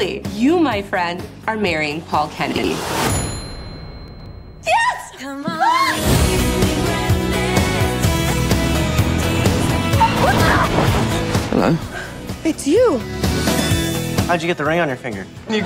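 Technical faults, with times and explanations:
2.52–2.64 s, 4.08–4.26 s and 10.20–10.38 s, chunks out of order: brief jumbled stutters. In each, a 60 ms chunk plays late, after one or two of its successors, so nothing is lost, but three hard joins break the flow.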